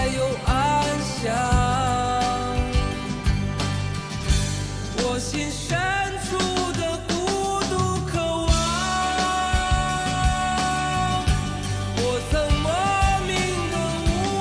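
No technical faults can be heard anywhere in the recording, and the signal stays steady and continuous throughout.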